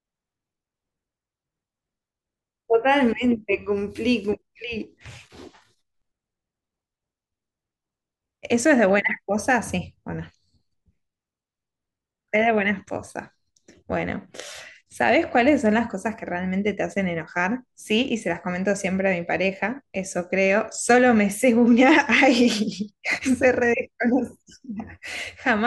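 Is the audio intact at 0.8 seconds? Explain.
Yes, the speech at 0.8 seconds is intact, with no audible dropout, click, distortion or other fault at that moment.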